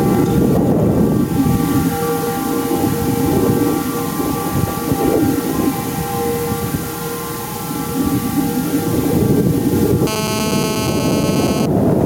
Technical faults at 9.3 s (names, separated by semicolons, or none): gain pumping